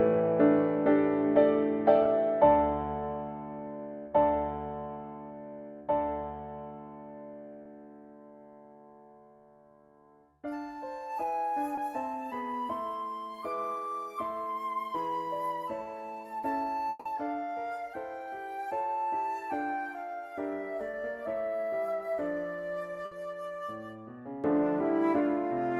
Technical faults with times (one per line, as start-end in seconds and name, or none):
2.03-2.07 short concealed packet loss
7.63-7.67 short concealed packet loss
11.75-11.79 short concealed packet loss
15.83-15.87 short concealed packet loss
16.89-17.07 long network dropout
20.91-20.95 short concealed packet loss
23.05-23.13 burst of packet loss